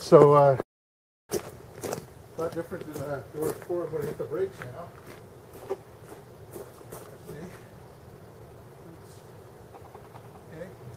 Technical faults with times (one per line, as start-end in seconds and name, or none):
0.61-1.31 call audio freeze
7.07-9.01 jitter buffer speed-up